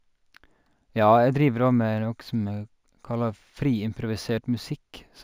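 A faint metallic shimmer rides on sibilants throughout this speech, with dulled top end: imaging from linear upsampling, which points to 16 kHz raised to 48 kHz, leaving weak mirror images between 8 and 16 kHz.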